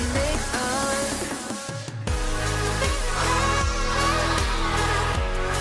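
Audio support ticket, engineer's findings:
No playback faults heard; level, timing and continuity hold steady across the clip, nothing for the ticket.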